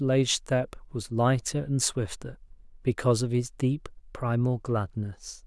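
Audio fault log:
No technical faults are audible anywhere in the speech recording, and the signal holds steady from its opening moment to its close.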